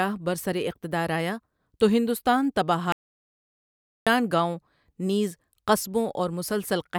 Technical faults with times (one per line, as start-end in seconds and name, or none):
2.92-4.07 audio dropout to silence